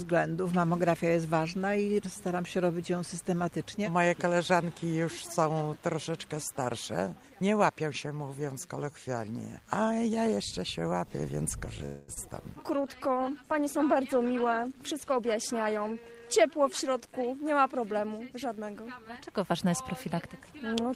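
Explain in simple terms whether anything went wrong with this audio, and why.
Computer activity noise runs through the whole clip as a faint buzz pulsing about a hundred times a second. The computer's changing workload disturbs the electrical ground the audio circuit shares, so the buzz follows the machine's activity rather than the sound itself.

A call audio freeze happens from 11.85 to 12.10 s. The sound briefly stretches into a fading buzz or hiss, likely because network packets were delayed and the receiver ran out of audio to play. When they arrived, playback resumed where it stopped, adding a quarter-second pause without losing anything.

Short concealed packet loss follows at 12.14 s. About 20 milliseconds of audio never arrived in time, so the receiver patched the hole by extending the preceding sound and blending back in. You hear a tiny smear or wobble where the real audio was lost.

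A call bitrate drop runs from 12.81 to 17.33 s. The connection seemed to weaken, so the sender squeezed the audio into far less data. For those four and a half seconds the sound turns rougher and more muffled, with high frequencies trimmed away.

A jitter buffer speed-up occurs from 14.74 to 15.92 s, inside the low-quality stretch. Audio had piled up waiting to be played, so the receiver snipped out many tiny slices, roughly 70 milliseconds in total. The sound runs about 6% faster at an unchanged pitch and feels slightly hurried.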